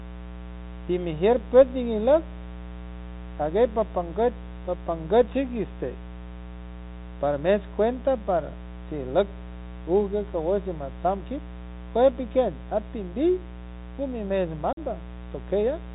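Mains buzz runs through the whole recording, a steady, raspy 60 Hz hum sitting roughly 15 dB below the speech. Sharp switching spikes from a dimmer, rectifier or poorly shielded cable enter the signal twice per mains cycle, so the buzz carries a dense stack of 60 Hz harmonics that climb well into the kilohertz range. That gives it an edgy, gritty texture rather than a smooth low hum, and it stays constant beneath every pause.

The Bluetooth CVSD headset codec is also present throughout, and its damage is plainly audible. The narrowband headset link encodes each sample as a single up-or-down bit with an adaptive step size, which fits a 64 kbit/s CVSD stream. Everything above 4 kHz is gone, so the speech sounds boxed-in and telephone-like. Loud, bright sounds outrun the step size and distort, s sounds come out scratchy, and a granular hiss lies under the voice.

Unconcealed Bluetooth headset packet loss occurs from 14.73 to 14.78 s. 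About 45 ms of audio is lost, which points to a run of around seven short voice packets failing between headset and phone. Silence or an idle pattern fills the gap instead of any concealment. The result is a brief hole in the speech with abrupt edges, and the speech resumes quieter for a moment as the CVSD decoder recovers.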